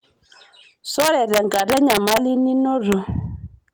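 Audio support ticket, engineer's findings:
Harsh, violent cracks on louder speech peaks from 1.0 to 2.17 s, plus a single crack at 2.92 s. Integer overflow in the gain or mixing stage: pushed about 1 dB past full scale, peaks wrap to opposite sign instead of limiting. Sharper than clipping.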